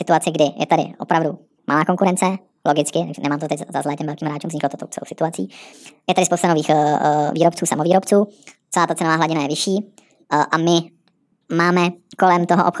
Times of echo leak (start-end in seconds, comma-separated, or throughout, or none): none